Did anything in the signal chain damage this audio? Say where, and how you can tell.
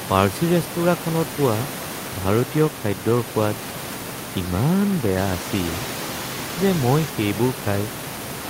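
No, nothing in the signal chain has damaged this speech recording. The only thing heard besides the talker is the room's own background noise, sitting about 13 dB below the speech, which was picked up by the microphone rather than added by the system.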